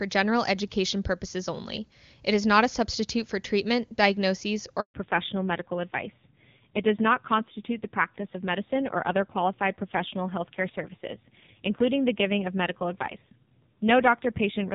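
A handover gap runs from 4.80 to 4.94 s, just after "substitute for treatment diagnoses". The call was switched between networks and no speech frames arrived for 140 ms, so the speech cuts away almost instantly into silence and whatever was said in that moment is lost.

A fallback to narrowband follows at 4.94 s and lasts to the end. The call drops from clear HD Voice wideband coding to an older narrowband codec, so everything above 4 kHz disappears. The speech turns muffled and gritty, which points to a low-rate narrowband mode.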